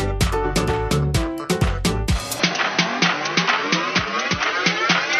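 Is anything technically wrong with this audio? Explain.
Yes. From 2.40 s to the end, the sound turns duller and boxy, with nothing above 6.3 kHz and a faint new background noise. This points to an input switched to a poorer device, likely a narrower-band microphone. A spectrogram shows the top band abruptly cut off at 2.40 s, while the waveform continues with no gap or obvious level jump.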